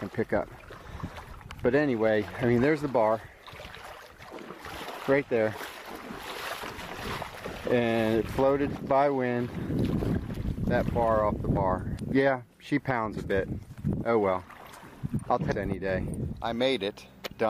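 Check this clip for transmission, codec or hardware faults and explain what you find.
The clip has two instances of damaged data in a compressed stream, at 11.95 to 12.01 s and 15.48 to 15.52 s. Corrupted bytes make the decoder misread frames and lose sync, producing a brief chirp or blip.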